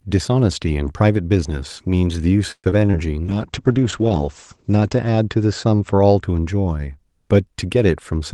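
Repeated packet loss (robotic sound) runs from 2.51 to 2.95 s. Within that stretch the speech breaks up into four separate gaps, the longest lasting 124 ms. Each time a piece of audio fails to arrive, the receiver bridges the hole by extending the last sound it had. That fill covers roughly 40% of the span, about 173 ms in total, and another 60 ms drops out altogether. The result is a choppy, robotic texture with pieces of sound missing.

A call bitrate drop follows from 3.25 to 6.29 s. The speech turns rough and watery, and it also becomes muffled as the top end closes in from 12 kHz to 8 kHz. That pattern fits an encoder told to fall from about 32 kbps to about 9 kbps after the bandwidth estimate collapsed. With far fewer bits, the codec quantises much more coarsely and discards the upper frequencies. The degradation is at its worst for about 1.2 s before the bitrate climbs back.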